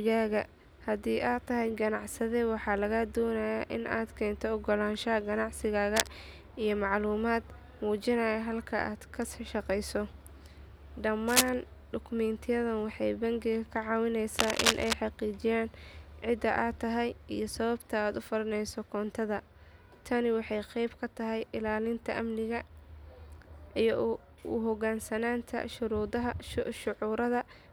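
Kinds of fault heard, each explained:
Cable scratch noise: at 5.96 to 6.13 s, 11.28 to 11.49 s and 14.39 to 14.93 s, short bursts of dense, ragged crackle rasp over the speech. They are roughly as loud as the speech itself, and somewhat louder in the second burst. The last burst stretches to about half a second. A worn cable, plug or control was likely being moved, its contact resistance jumping erratically and adding uneven noise while it shifted.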